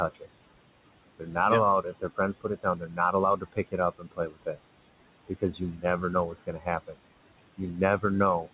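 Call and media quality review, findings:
Noise suppressor artifacts, throughout: suppressor attenuating bands it classifies as steady noise by about 20 dB, frame by frame. Room noise, about 15 dB below speech, drops away in pauses and returns underneath speech, so the background pumps with the talker.

Speech cut by the noise suppressor: suppressor misclassifying speech as noise and gating it with the background, at 0.14–0.26 s, 1.19–1.36 s, 1.82–4.6 s, 5.28–5.84 s and 6.29–6.96 s. Drops of about 14 to 21 dB, roughly 2 s total. Syllables sound swallowed. Narrowband call path, nothing above 4 kHz, consistent with 64 kbps G.711 A-law.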